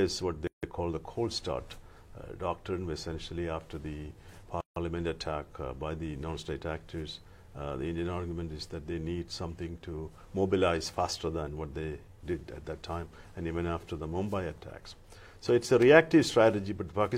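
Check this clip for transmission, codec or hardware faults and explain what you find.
Two faults of one kind turn up: a gap at a join of encoded pieces, from 0.47 to 0.63 s and from 4.61 to 4.76 s, each about 157 ms. Separately encoded pieces were joined untrimmed, keeping encoder start delay and last-frame padding. Continuous sound drops to silence with smeared edges, then resumes exactly where it stopped. Unlike a dropout, nothing is skipped.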